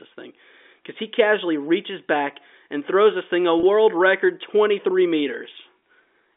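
At 3.60 to 3.63 s, just after "throws this thing a", and again at 5.79 to 5.82 s, about 30 ms of audio went missing, consistent with a single dropped packet. Both are packet loss with pitch repetition: the receiver looped the last pitch period to fill the gap, so each sounds like a brief, slightly buzzy hold on the speech over the narrow G.711 telephone band.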